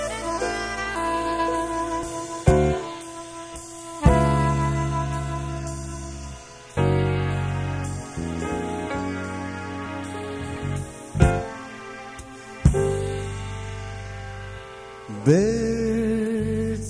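No technical faults are audible.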